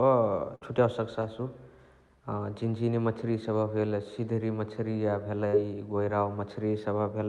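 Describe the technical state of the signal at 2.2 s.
At 2.2 s the speech is intact, with no dropout, glitch or other fault at that moment.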